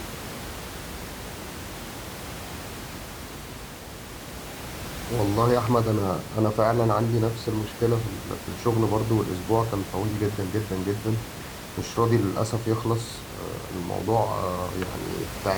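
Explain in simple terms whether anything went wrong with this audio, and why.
Nothing went wrong here.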